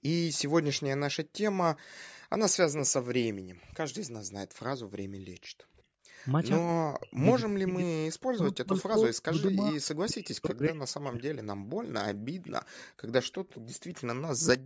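From 3.45 to 6.08 s, the background is gated by the echo canceller. The room sound drops by about 40 dB for about a second in total while the far end plays.

At 5.78 to 5.82 s, a very faint copy of the speech returns 182 ms late. It is an echo leak, and the cause is likely an echo canceller letting some loudspeaker sound through.

From 6.68 to 11.45 s, the speech is likely suppressed in double talk. The voice dips deeply and breaks up for around 3 s while both sides talk.

From 8.75 to 9.47 s, the same 182 ms echo leak comes back, clearer this time.

From 12.15 to 12.26 s, the background is gated again.

From 12.45 to 13.61 s, the delayed echo is heard once more, faint.

From 14.59 s to the end, the background is gated once more.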